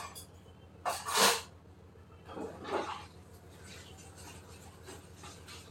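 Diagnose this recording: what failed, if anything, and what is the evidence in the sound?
Nothing in the recording points to a failure at any stage of the chain, and the everyday sounds it carries arrive with their level, timing and continuity intact.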